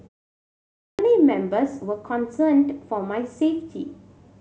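At 0.51 s, after a half-second of silence, the speech bursts in abruptly with its opening sounds missing; about 0.48 s is swallowed, up to 0.99 s. This is a clipped start after a pause: the output device dozed off during the silence and took that long to wake.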